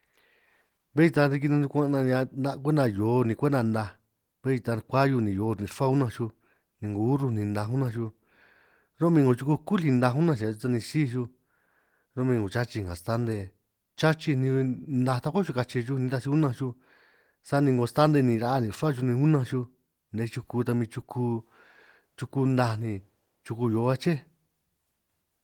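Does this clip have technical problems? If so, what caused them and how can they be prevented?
No, this clip has no technical problems, so there is nothing to prevent.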